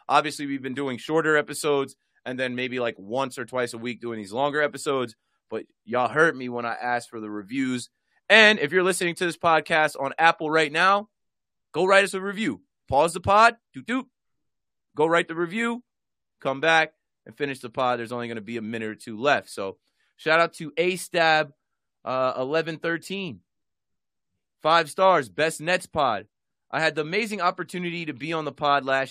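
No technical faults can be heard anywhere in the speech. At no point does the playback break, stall or change character in a way that would point to a problem in the signal chain.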